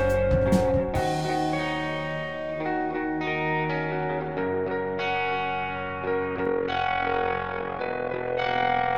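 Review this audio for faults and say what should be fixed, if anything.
From 6.46 s to the end at 8.97 s the music has overlap-add ripple: windowed frames rejoin without a constant summed gain, so the level swings about 11 dB around 40 times a second, a robotic flutter. The waveform envelope scallops, and a spectrogram shows evenly spaced vertical stripes. Choose a window and hop size that satisfy constant overlap-add.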